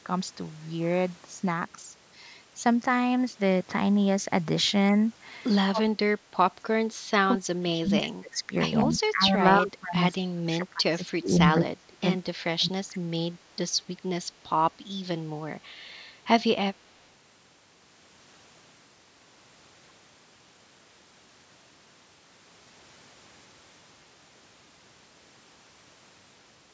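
From 5.67 to 6.24 s, and again at 6.6 to 6.69, 7.38 to 8.52, 8.85 to 9.4, 9.59 to 10.0, 10.18 to 12.06 and 12.25 to 13.11 s, the speech is chopped down in level, falling by roughly 20 to 30 dB at its deepest, with the longest stretch lasting around one and a half seconds. This is speech suppressed in double talk, most likely from an echo canceller that couldn't tell the near talker from loudspeaker echo and attenuated both. On a waveform the envelope collapses into thin, ragged stretches. On a spectrogram the harmonics fade or break into fragments across the band, which ends at 8 kHz.

Between 6.97 and 7.07 s, in the short gap between the second and third suppressed passages, the room sound itself dips by about 8 dB for roughly a tenth of a second. This is background gated by the echo canceller: the canceller clamps the microphone down while the loudspeaker is active and then releases it. 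It sounds like a brief hole in the ambience. On a spectrogram the low-level noise floor darkens in a narrow vertical band, and on the waveform the residual noise narrows briefly before recovering.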